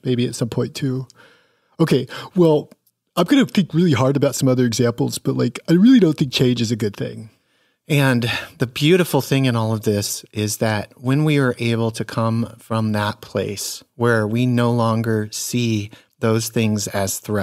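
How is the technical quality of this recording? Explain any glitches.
No technical faults turn up anywhere in the recording, and the signal stays continuous and intact throughout.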